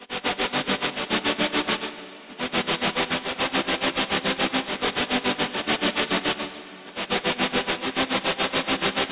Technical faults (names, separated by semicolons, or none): aliasing